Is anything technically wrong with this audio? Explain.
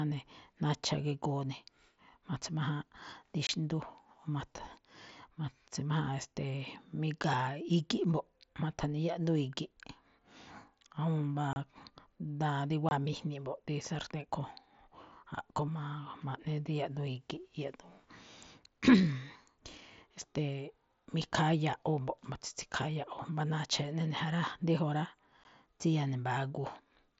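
Yes. At 3.47 to 3.49 s, 11.53 to 11.56 s, 12.89 to 12.91 s and 25.44 s the speech drops into abrupt silent holes. This is unconcealed Bluetooth headset packet loss: lost mSBC frames from the headset go unrepaired.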